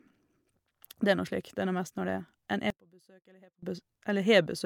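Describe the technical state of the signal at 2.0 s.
At 2.0 s the speech signal is intact, with no audible fault at that moment.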